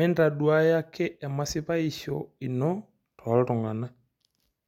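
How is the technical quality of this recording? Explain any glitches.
No glitches or technical faults are audible anywhere in the recording, so there is nothing to explain.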